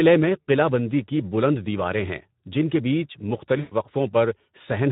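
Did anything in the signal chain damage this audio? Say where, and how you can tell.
Yes. At the codec stage, Speex coding runs throughout, leaving the speech hoarse and noisy because the coarse excitation lacks bits, which fits a bitrate near 11 kbps.

At the network stage, VoIP packet loss concealed by the speech codec appears from 3.59 to 3.74 s. About 120 ms is extrapolated from the last pitch and filter into a stretched, fading sound, and the speech stays weakened briefly afterwards.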